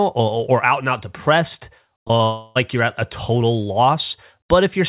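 At 2.00, 2.08 and 2.17 s, short concealed packet loss: about 20 ms of audio each time arrived too late, and the receiver patched it from the preceding sound, leaving brief smears or wobbles. From 2.23 to 2.57 s comes a long network dropout, likely a stall in the network, where the receiver stretches the last sound into a fading buzz or hiss for the whole gap before the speech resumes with that piece missing. Throughout, nothing reaches above 4 kHz, which fits a narrowband G.711 call codec.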